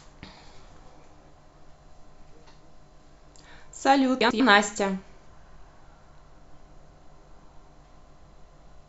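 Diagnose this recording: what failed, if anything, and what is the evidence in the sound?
Frames out of order, a network or packet-handling fault: at 4.21 to 4.40 s and 6.77 to 7.03 s the speech flutters as two adjacent blocks of about 96 ms and 128 ms play swapped. Unlike a dropout or a repeat, nothing is lost or duplicated.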